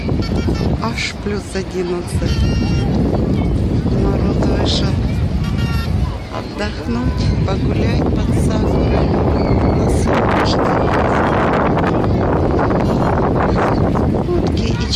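No faults were found anywhere in the audio.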